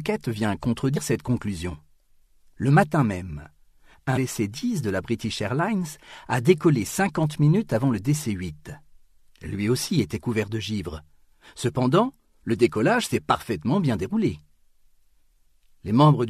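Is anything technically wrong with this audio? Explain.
Yes. Damaged data in a compressed stream produces short glitches from about 0.95 to 0.98 s and at 4.16 s. Corrupt bytes make the decoder misread frames and lose sync until it finds the next header.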